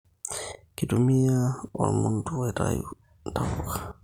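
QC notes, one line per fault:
No faults detected in clip.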